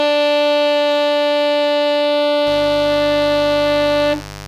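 From 2.46 s to the end, mains buzz at 50 Hz rasps under the music, roughly 15 dB down. It is switching spikes at 100 Hz, appearing on a spectrogram as stacked harmonic lines into several kHz.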